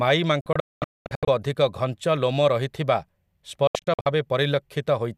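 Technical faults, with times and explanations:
0.41–1.28 s: digital broadcast dropout. The receiver lost frames and muted, cutting the speech with 3 ms fades into several short holes totalling 0.62 s, the longest 0.22 s.
3.67–4.06 s: digital broadcast dropout. Frames again failed and the receiver muted, punching brief gaps totalling 0.22 s, the longest 72 ms, so that speech never arrives.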